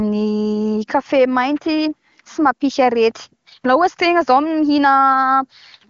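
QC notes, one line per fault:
No faults to note in this speech clip, which comes through the AMR wideband (HD Voice) codec at a high rate with content reaching to about 7 kHz.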